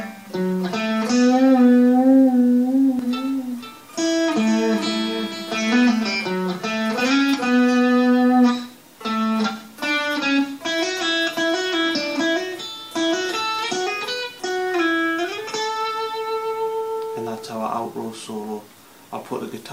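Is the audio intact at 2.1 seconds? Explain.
Yes, at 2.1 seconds the audio is intact, with no dropout, click, distortion or other fault in the signal at that point.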